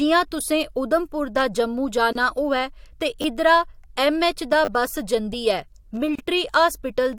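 At 2.13 s, right after "उधमपुर दा जम्मू" and before "होऐ ते इद्धरा ऐम्मऐच्च", the speech drops out for about 27 ms with smeared edges, then resumes exactly where it stopped. This is a gap at a join of encoded pieces: the audio was encoded in separate sections and joined without trimming, so each section's encoder start-up silence and padded final frame remain. The joins fall every 4 s.

At 3.22 s, between "होऐ ते" and "इद्धरा ऐम्मऐच्च दा बस", a tiny stutter sounds like a brief buzzy click. This is a repeated buffer: new audio didn't arrive in time, so the device replayed its last block, a 10 ms slice heard two extra times with hard seams. About 20 ms of real speech is lost. At 4.65 s, after "ते इद्धरा ऐम्मऐच्च दा" and before "बस जंदी", the same thing happens with three extra plays, giving a slightly longer buzz and losing about 30 ms.

At 6.15 s, the next join brings another gap of about 32 ms, again with smeared edges and an unbroken continuation.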